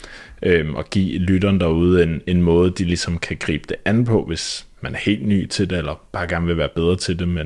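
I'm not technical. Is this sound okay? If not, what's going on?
Yes, it sounds fine.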